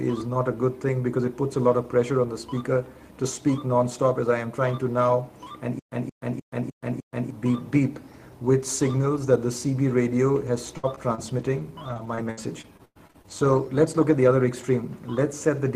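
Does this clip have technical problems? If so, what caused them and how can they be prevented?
Yes. From 5.79 to 7.30 s the clip stutters with silent gaps: a 175 ms burst of sound plays, then about 127 ms of silence follows, and the cycle returns five times at an even pace of roughly one every 0.3 s. This is likely a stalled player or stream that replayed its last fragment on each retry before running dry, so the audio meant for that stretch never arrives. Larger playback buffers and steadier delivery from the source would prevent it.

From 10.47 to 13.31 s there is repeated packet loss with a choppy, robotic quality. Fourteen separate holes, adding up to 440 ms and the longest lasting 103 ms, were each patched by extending the preceding sound. Around 0.4 s was filled this way, about 15 percent of the span, and the closely spaced patches produce the mechanical texture. A more reliable network path, or a jitter buffer with forward error correction, would prevent it.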